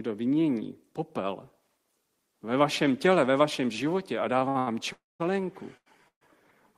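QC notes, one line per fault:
4.39–4.69 s, short stall from a late packet, three in a row: just after "ve vašem životě a", the jitter buffer ran dry and the receiver held the last speech sound for about 15, 59 and 78 ms, then resumed at the same point with nothing lost. It sounds like a stuttering drag with a faint buzz. On a spectrogram the harmonics run flat and smeared, and the waveform shows repeated, slightly dipping cycles.
4.93–5.22 s, call audio freeze: the sound stops for 270 ms, with a brief fading buzz followed by about 210 ms of silence, then picks up where it left off, so a gap is inserted. The likely cause is packets held up in transit emptying the jitter buffer. The spectrogram shows a short smear, then a blank vertical band, and the waveform drops flat.
5.77–5.88 s, short stall from a late packet: the last sound is held for about 89 ms while a late packet is awaited, then speech resumes without loss, which is audible as a drawn-out, slightly buzzy syllable. 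On a spectrogram this shows as stretched horizontal harmonic lines, and the waveform as a run of near-identical periods.
6.08–6.23 s, call audio freeze: a 131 ms insertion consisting of a short decaying buzz and then about 110 ms of silence, after which the audio continues from the same place. The spectrogram shows a brief smear ending in an empty gap, and the waveform goes flat before the speech returns.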